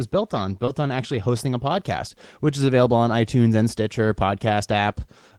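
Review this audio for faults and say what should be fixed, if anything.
Short concealed packet loss at 0.65 to 0.69 s: 20 ms of speech missed the decoder deadline, and the receiver filled 17 ms by extending the preceding sound before blending back, leaving a brief disturbance. A deeper jitter buffer or forward error correction would prevent it.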